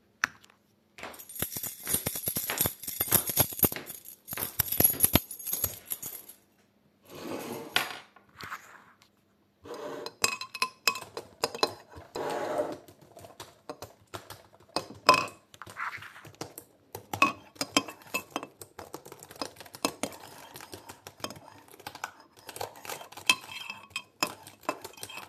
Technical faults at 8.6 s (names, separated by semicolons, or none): damaged data in a compressed stream